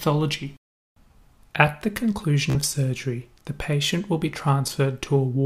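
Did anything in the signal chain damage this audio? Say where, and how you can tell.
Yes, a Bluetooth stutter on the wireless link at 2.50–2.56 s. A short slice repeats as a buzz while about 46 ms of lost packets is skipped.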